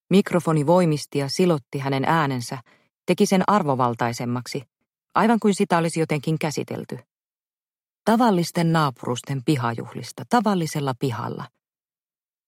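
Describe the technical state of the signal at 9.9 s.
At 9.9 s the signal is intact, with no audible technical fault at that moment.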